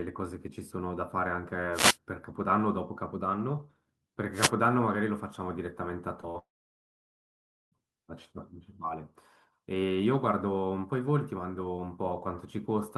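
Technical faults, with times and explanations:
1.72–1.97 s and 4.32–4.51 s, wireless microphone noise hits: two short swishes of static, each roughly a fifth of a second. The FM radio link fades as reflected signals cancel, so receiver noise rises and briefly covers the speech before the signal recovers.
6.21–6.25 s and 6.31–6.36 s, short concealed packet losses: brief smears where 20 ms and then 40 ms of speech never arrived in time. The decoder extended the preceding sound to fill each gap, then blended back into real audio.
6.38–7.74 s, long network dropout: about 1.3 s of speech is gone. A very short continuation of the last sound gives way to about 1.27 s of silence before speech resumes further on, most likely because audio stopped arriving and the missing stretch was never played.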